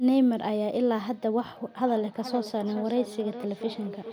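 From 1.87 s onward, feedback echo between two devices: a second device's playback re-enters the microphone, repeating roughly every 0.4 s, peaking about -14 dB, visible as evenly spaced fainter spectrogram copies.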